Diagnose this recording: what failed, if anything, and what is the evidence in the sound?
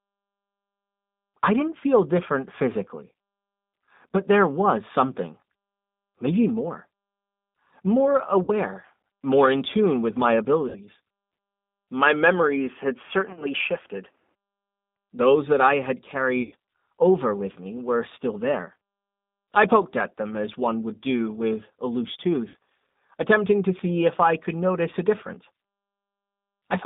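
G.729 codec, throughout the speech. This is a codec-stage fault: the audio is confined to a band of roughly 200 Hz to 3.7 kHz, with nothing above it, and the codec damage is plainly audible as a rough, synthetic edge on every phrase. The texture fits an 8 kbit/s G.729A path, which rebuilds each 10 ms frame from a vocal tract filter, a pitch predictor and a few pulses rather than the actual waveform.

VoIP packet loss concealed by the speech codec, at the network stage, at 8.43 to 8.52 s, 10.69 to 10.80 s after "in tune with my", 13.30 to 13.49 s, 16.42 to 16.54 s between "that I had" and "over with me were", and 22.49 to 22.55 s after "do with a loose". Each gap is filled with a fading stretch as the decoder extrapolates its last pitch and filter. About 50 to 100 ms goes missing each time, and at 13.3 s the losses are scattered in short runs.

Input switched to a poorer device, from 12.02 to 14.35 s. 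The sound suddenly narrows, with nothing above 3.4 kHz, and a new background noise appears about 45 dB below the speech. The level stays steady and there is no gap at the switch. The likely cause is the capture stage changing to a different microphone or a headset call profile with its own band and noise floor, before switching back.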